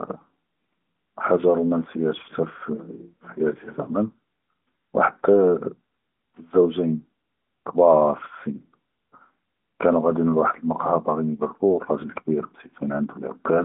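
No technical faults can be heard anywhere in the clip; the speech comes through the AMR narrowband mobile codec, with nothing above 3.8 kHz.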